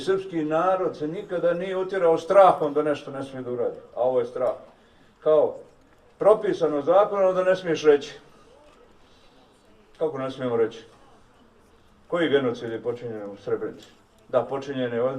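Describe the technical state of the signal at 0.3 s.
At 0.3 s the signal is intact, with no audible dropout, distortion or other fault.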